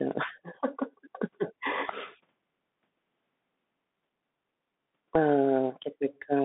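From start to finish the speech has been through a Bluetooth CVSD headset codec, the narrowband one headsets fall back on. The band runs only from about 150 Hz to 3.6 kHz, so it sounds boxed-in and telephone-like. The codec tracks the waveform one bit at a time, stepping up or down with an adaptive step size, which fits a 64 kbps stream. When loud, bright sounds move faster than the step can follow, they smear into distortion. The s sounds come out scratchy, and a grainy hiss sits under everything. The damage is plainly audible.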